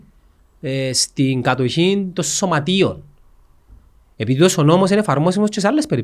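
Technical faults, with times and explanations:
No technical faults are audible in this speech recording.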